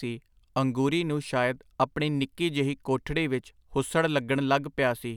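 No technical faults can be heard anywhere in this speech recording. At no moment does anything in the signal chain audibly go wrong.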